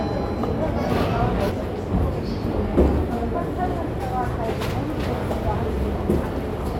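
A skip ahead occurs at 1.49 to 1.51 s. About a second of the everyday sound was dropped, probably discarded as an overflowing jitter buffer caught up on audio already queued. Playback leaps forward with no gap, and the two sides are joined almost directly.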